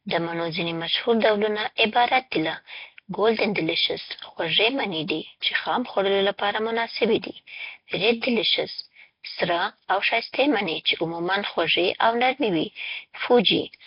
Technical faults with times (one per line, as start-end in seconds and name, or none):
0.00-13.87 Nellymoser compression
5.08-5.10 pre-echo